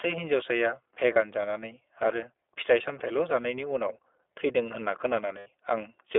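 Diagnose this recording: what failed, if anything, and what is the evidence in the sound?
At the codec stage, the speech runs through the iLBC codec for the whole clip. The band stops near 3.5 kHz with little below 300 Hz, and a plainly rough, slightly synthetic texture sits on every syllable, which fits the 15.2 kbps iLBC mode. Ordinary telephone band-limiting alone would sound muffled but not grainy.

At the network stage, lost iLBC frames appear at 1.14–1.17 s and 5.38–5.48 s. Each gap becomes a held, faintly buzzy vowel-like tone: about 20 ms, fitting a single 20 ms frame, then about 80 ms. The voice is clean again immediately afterward because each iLBC frame decodes independently. A codec that carries state between frames would keep smearing the audio after a loss instead.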